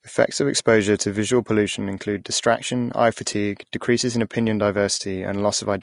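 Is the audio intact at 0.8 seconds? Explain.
No, at 0.8 seconds the speech carries the same damage as the rest of the clip, which is likely Vorbis compression. Nothing reaches above 10.5 kHz, and the coarsely quantised treble turns fine detail into hiss and grain, which fits a bitrate around 40 kbps.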